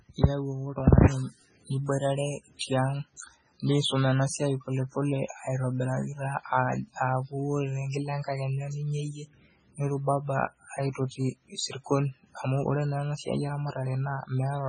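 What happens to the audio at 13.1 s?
At 13.1 s the speech carries the swirly, watery smearing of heavy MP3 compression, present throughout and likely from a very low bitrate around 16 kbps. Nothing survives above 10.3 kHz, and, unlike a plain low-pass cut, weak frequency lines flicker between frames.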